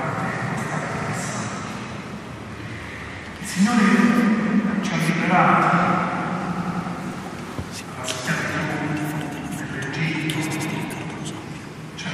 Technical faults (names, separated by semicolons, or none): repeated frames